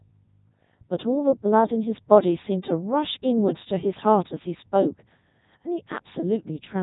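From start to finish the speech has passed through a Codec 2 vocoder, and the damage is heavy. Rather than preserving the waveform, the decoder rebuilds the voice from sine waves driven by pitch, voicing, energy and a coarse spectral envelope, giving a robotic, buzzy timbre. Nothing is present above 3.8 kHz, and the overall quality fits Codec 2's highest 3.2 kbit/s mode.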